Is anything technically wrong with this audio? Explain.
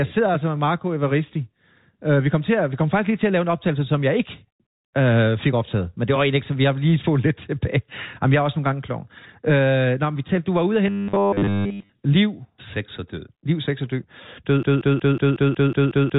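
Yes, there are two faults in this speech clip, which sits on a telephone-band G.711 channel with nothing above 3.8 kHz.

From 10.87 to 11.89 s, right after "var ude og", there is robotic sound from repeated short buffers. The likely cause is audio arriving too slowly, so essentially every buffer is a repeat of a roughly 10 ms slice. That imposes a rigid 100 Hz metallic buzz that only loosely tracks the speech.

From 14.63 s to the end there is a broken-record loop. The likely cause is a stalled stream that kept replaying its last fragment: a 183 ms piece repeats back to back nine times, and the speech that should have followed is lost.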